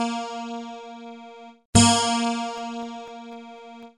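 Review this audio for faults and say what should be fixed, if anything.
Periodic USB or driver dropouts appear from 2.58 s to 3.83 s. A short gap repeats every 0.25 s, about seven times in total. Each gap lasts well under a millisecond and is filled with silence. The result is a row of evenly spaced ticks over the signal. Something on the system is blocking the USB bus or the audio driver at a fixed interval. Find and disable the recurring background task, or raise the driver's buffer size.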